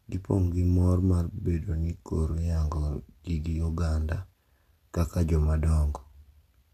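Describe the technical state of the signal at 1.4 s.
At 1.4 s there is a repeated frames fault spanning 1.37 to 1.44 s: a block of about 70 ms of compressed speech, consistent with a run of three frames, is decoded and played a second time. It is heard as a short stutter and lengthens the audio by 70 ms.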